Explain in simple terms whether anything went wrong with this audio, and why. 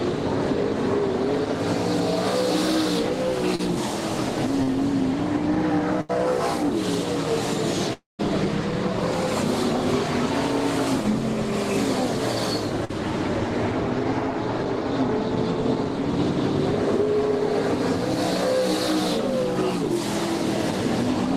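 Short concealed packet loss happens three times: at about 3.55 s, 4.63 s and 12.85 s. Each time a few hundredths of a second of the audio arrived too late to be played. The player covered each hole, about 34, 40 and 45 ms long, by stretching out the sound just before it and then blending back into the real audio. What you hear is a brief smear or wobble, and 20 to 40 ms of the original is gone each time.

A burst of packet loss runs from 6.01 to 6.11 s. A larger group of data went missing, so the player had to fill about 82 ms on its own. It kept the last sound going while turning it down, which gives a held buzz or a fading hiss. When the audio picks up again, about 80 ms of the original has been skipped.

From 7.93 to 8.21 s the sound stretches into a fading continuation that lasts roughly a quarter of a second. About 140 ms of that is plain silence, and then the audio resumes with about 260 ms of the original missing. 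This is likely a long network dropout, where nothing arrives for a while, the player's fill-in fades away, and the lost stretch is never played.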